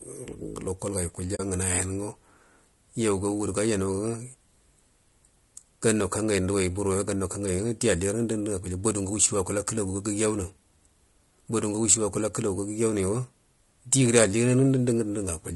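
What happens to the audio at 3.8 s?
At 3.8 s the speech sounds rough and grainy, with noise filling the gaps between harmonics, as it does across the whole clip. The likely cause is low-delay AAC compression (AAC-ELD), whose short frames of about 10 ms blur pitch harmonics, fitting a bitrate near 32 kbps. Longer-frame codecs would instead swirl or smear attacks.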